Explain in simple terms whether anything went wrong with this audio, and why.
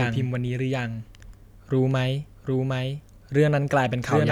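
Throughout the clip, the speech is heard twice: a second, somewhat quieter copy trails the original by about 0.7 seconds, with no echo tail or room sound. This is a doubled audio track, likely from the same sound being captured again through a slower path.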